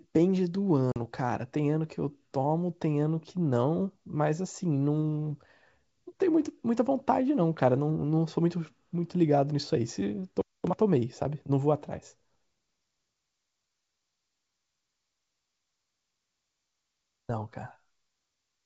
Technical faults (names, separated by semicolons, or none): packet loss on an ADPCM call